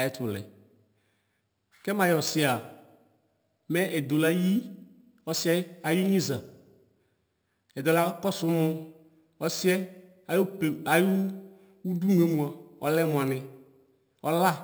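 A bright metallic fizz shadows the speech throughout, about 18 dB down: imaging from sample-and-hold upsampling, with unfiltered repeated samples mirroring the spectrum between 6 and 12 kHz, suggesting a 12 kHz source rate.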